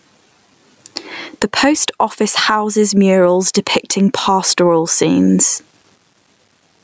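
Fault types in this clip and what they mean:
Gain pumping: throughout the speech, the gain swings by about 25 dB and is pulled down under loud syllables, likely from too much input gain feeding a fast limiter. Loud and soft parts end up closer in level, and the sound is squashed.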